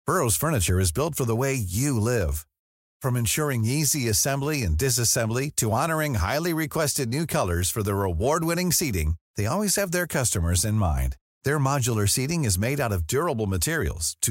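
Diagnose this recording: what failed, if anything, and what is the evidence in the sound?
Nothing failed; no fault is audible in this speech.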